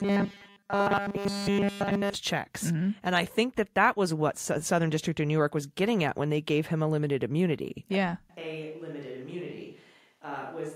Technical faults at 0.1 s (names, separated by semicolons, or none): robotic sound from repeated short buffers